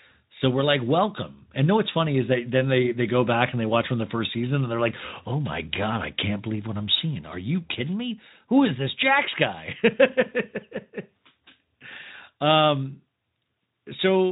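Nothing in the signal departs from what its Speex path produces, including the upper limit near 3.9 kHz, and no technical fault can be heard in this speech at any point.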